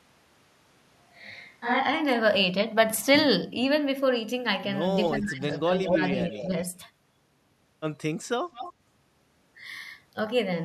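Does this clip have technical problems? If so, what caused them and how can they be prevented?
Yes. There are three kinds of fault.

From the very start to 1.78 s, the speech sounds roomy and hollow, with thinner bass. This points to a switch to a distant microphone. The close microphone's signal was likely missing, so a microphone further away carried the voice. The level stays about the same, but room noise sits only about 35 dB below the speech. Then the sound snaps back to close pickup. To prevent it, check the close microphone's connection and routing before recording starts.

An echo leak appears at 5.04 to 5.09 s, 5.52 to 5.58 s, 5.86 to 6.08 s, 6.31 to 6.48 s and 8.52 to 8.73 s. Each time, a copy of the voice returns about 0.22 s late. These are short scraps. Their strength varies widely. At 5.86 s the copy is about as loud as the speech. At 5.52 s it is about 30 dB down, and the others are about 10 to 15 dB down. 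This is likely a far-end loudspeaker whose echo canceller failed to remove all of what its microphone picked up, so part of it was sent back. To prevent it, the far side should use headphones or a better-tuned echo canceller.

From 5.08 to 5.48 s and from 6.26 to 6.52 s, the speech dips while sound from the other side overlaps it. This is speech suppressed in double talk. The first dip is deep, about 20 dB, and the second is shallow, about 5 dB. The echo canceller likely could not tell its own talker from the returning echo, so it turned both down. To prevent it, use headphones and a canceller that handles double talk properly.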